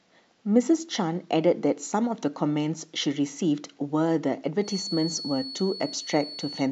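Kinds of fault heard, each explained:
Feedback whistle: a thin, steady tone near 4.4 kHz sits under the speech from about 4.6 s to the end, roughly 10 dB down and swelling and fading slowly. It likely comes from a loudspeaker-to-microphone loop held just short of runaway feedback.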